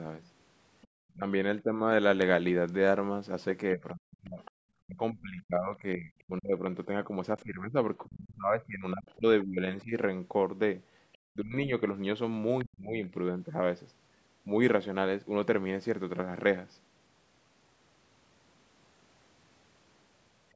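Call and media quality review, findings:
Other side's voice leaking through: faint second talker, 0.24–1.12 s, brief scraps at 4.45–4.51, 9.09–9.14 and 11.13–11.18 s. Roughly 25 to 35 dB below the talker. Likely incomplete echo cancellation of loudspeaker playback.

Speech suppressed in double talk: talker dips and cuts out at 1.14–1.75, 3.74–9.93, 11.32–11.72 and 12.64–13.12 s. Drops reach around 35 dB. Likely echo canceller attenuating both sides during overlap.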